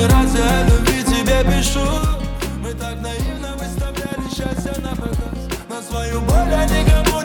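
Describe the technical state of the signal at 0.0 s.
The audio is intact at 0.0 s, with no fault present at that moment.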